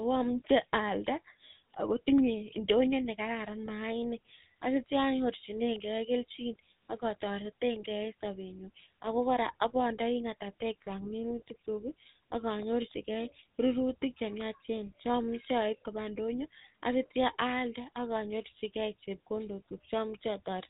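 GSM full-rate codec damage runs through the whole recording. The speech is rebuilt from a vocal-tract model driven by a sparse, regularly spaced pulse train, which fits the 13 kbps full-rate coder. Nothing above 4 kHz survives, and the speech carries a plainly audible buzzy, gravelly roughness.

Lost GSM frames occur twice, at 3.66 to 3.68 s and at 16.58 to 16.61 s, each about 20 ms long and pointing to a single dropped frame. The decoder repeated the previous good frame, leaving a brief rough, metallic ring in place of the missing sound.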